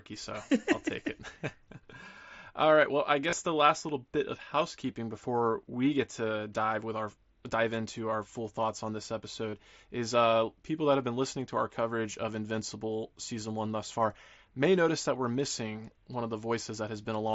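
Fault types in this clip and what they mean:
Concealed Bluetooth headset packet loss: Headset packets were lost, and the phone filled each gap by repeating a matching stretch of recent sound. This gives brief buzzy patches, about 26 and 34 ms long, at 3.30 s before "the last little bit" and 9.50 s after "full thoughts on this".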